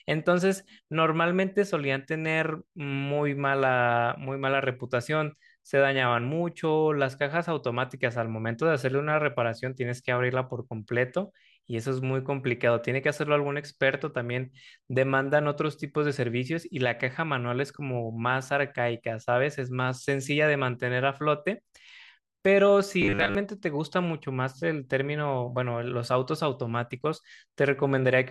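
From 23.02 to 23.35 s the speech takes on a robotic sound, a rigid metallic buzz near 100 Hz, likely from repeated short buffers of about 10 ms replacing most of the audio.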